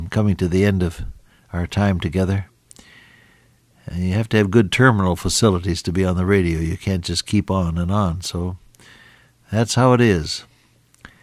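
Nothing in this audio sounds wrong to my ear, so there's no technical fault to point to here.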